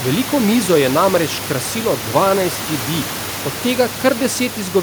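No technical faults can be heard in this speech recording, with the steady room noise sitting about 12 dB below the speech as part of the captured environment rather than any failure of the system.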